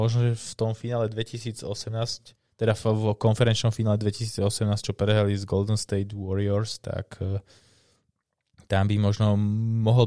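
Speech recording with no audible technical faults.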